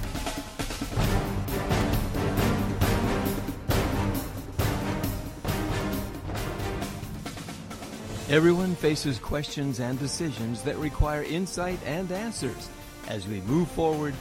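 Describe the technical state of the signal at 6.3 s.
At 6.3 s the signal carries computer activity noise, present across the whole clip. Load swings in the processor, graphics card or mouse disturb the ground the audio circuit shares, so a buzzing, chirping texture pulsing at around 300 Hz sits roughly 25 dB below the sound, following the machine's activity rather than the audio. A spectrogram shows fine vertical striations and a harmonic comb spaced near 300 Hz. The waveform shows small repetitive spikes riding on the signal.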